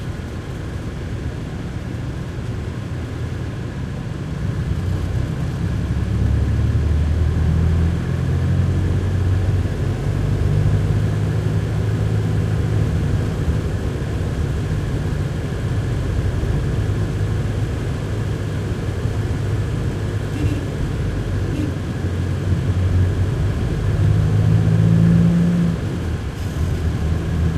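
Sounds, no faults heard.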